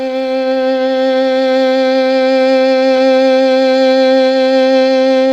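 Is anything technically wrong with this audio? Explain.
No, nothing technically wrong is audible in this music.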